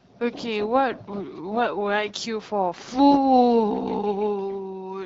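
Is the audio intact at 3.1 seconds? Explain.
Yes, the speech at 3.1 seconds is intact, coming through the AMR wideband (HD Voice) codec at 12.65 kbit/s with no fault at that moment.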